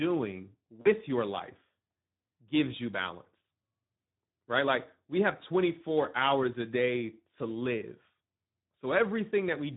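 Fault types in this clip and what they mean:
Speex codec: Speex is an older CELP speech codec built for low-rate voice calls and game chat. Here the damage is plainly audible for the whole clip. The speech sounds hoarse and grainy, because few bits are left to code the excitation signal. The amount of roughness fits a setting of about 11 kbps, a middle-to-low quality level for this codec.
VoIP packet loss concealed by the speech codec: Some voice packets never arrived, and the decoder filled the gap by guessing. It repeated its last pitch and spectral shape, and turned the level down frame by frame. In this clip the speech goes briefly smeared from 0.81 to 0.88 s. About 40 ms of audio is missing, which fits two lost 20 ms frames. The voice stays weak or distorted just afterwards while the decoder recovers.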